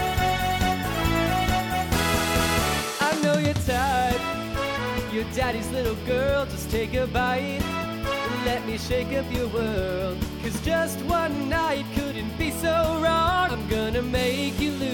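No technical faults are audible.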